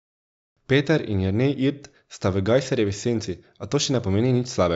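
Nothing stood out as a technical fault on listening to this speech recording.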